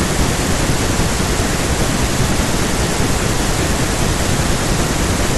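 No technical faults are audible.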